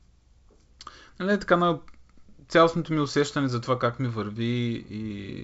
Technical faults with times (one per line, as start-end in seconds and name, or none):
none